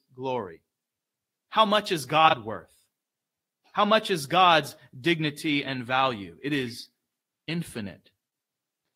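Around 2.28 to 2.34 s there's a case of frames out of order. Two neighbouring blocks, each about 23.2 ms long, got swapped before decoding, so that brief stretch of speech plays with its halves exchanged. You hear a quick garbled flutter, and no time goes missing.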